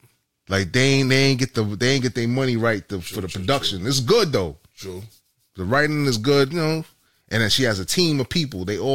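A speech recording with nothing technically wrong with it.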